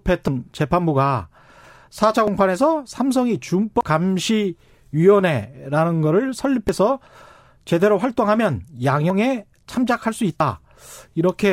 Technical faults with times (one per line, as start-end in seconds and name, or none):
0.28 dropped buffer (overrun)
2.28 dropped buffer (overrun)
3.81 dropped buffer (overrun)
6.69 dropped buffer (overrun)
9.10 dropped buffer (overrun)
10.40 dropped buffer (overrun)